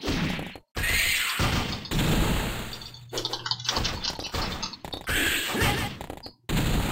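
A doubled audio track runs from 0.89 s to 3.27 s: a second full-band copy trails the original by roughly 150 ms at about 5 dB lower, with no decay or room colour, switching on and off abruptly. Likely a slower capture path or an edit holding two copies.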